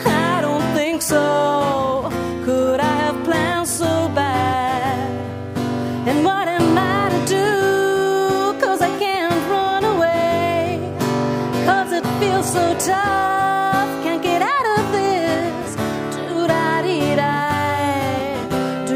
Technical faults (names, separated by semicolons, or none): none